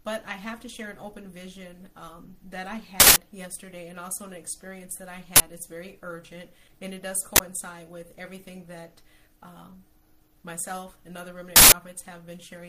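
Four harsh, loud bursts of digital noise cut through the audio, lasting 160 ms at 3.0–3.16 s, 40 ms at 5.36–5.4 s, 40 ms at 7.36–7.4 s and 160 ms at 11.56–11.72 s. This is an uninitialised buffer fault: playback reached blocks of memory that had not yet been filled with audio, so whatever stale data sat there was sent out as samples, replacing the sound for the length of each block.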